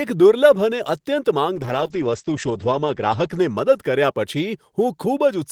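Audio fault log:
1.56–4.21 s call bitrate drop: the encoder falls from 32 to 10 kbps, coding speech coarsely and cutting bandwidth from 20 kHz to 8 kHz, so it sounds muffled and rough.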